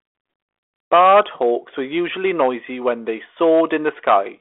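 Harsh crackle and fuzz break out on the loud parts of the speech from 0.93 to 1.53 s, more mildly from 1.97 to 2.48 s, and again from 3.41 to 4.17 s. This is hard clipping. The signal was driven about 8, 4 and 7 dB past what a stage could pass, so its peaks were cut flat, spraying harmonics high into the narrow telephone band. The light, 3.8 kHz-limited codec sound points to 32 kbit/s G.726.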